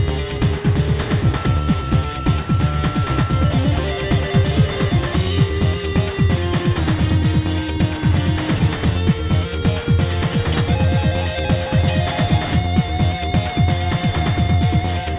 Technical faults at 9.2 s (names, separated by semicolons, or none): none